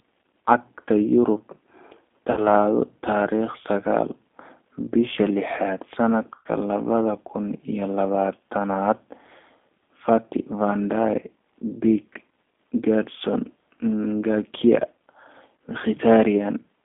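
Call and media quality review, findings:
G.729 codec, whole clip: rough, slightly synthetic speech. Band limited to roughly 250 Hz to 3.5 kHz, which fits G.729A at 8 kbit/s. Low-rate predictive coding (a vocal tract filter, a pitch predictor and a sparse pulse excitation) leaves audible coding damage. Spectrogram: hard ceiling at 3.5 kHz, empty above, smeared harmonics.

VoIP packet loss concealed by the speech codec, 2.31–2.42 s: 60 ms lost, fits three 20 ms packets. Decoder extrapolates the last pitch and filter at falling gain, stretching the sound out as it fades.

Same fault, 6.35–6.48 s, between "bisha lixaad" and "labada kun iyo labatanad": 100 ms lost, fits five packets. Longest gap, with the extrapolated sound fading and weak, distorted onset recovery afterwards.

Same fault, 12.13–12.17 s: 20 ms lost, one packet.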